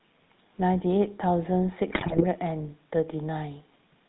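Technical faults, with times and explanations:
Throughout, GSM full-rate codec. The speech has a buzzy, gravelly roughness and nothing above 4 kHz. The sound suggests a 13 kbps full-rate coder, which rebuilds the voice from a vocal-tract model excited by sparse, regular pulses. The damage is plainly audible.
1.92 to 2.24 s, GSM bit errors. For about a third of a second the speech breaks into squawks, pops and gargling. Corrupted bits reached the decoder. Bad filter, pitch or gain values warped the spectrum or jolted the level frame by frame.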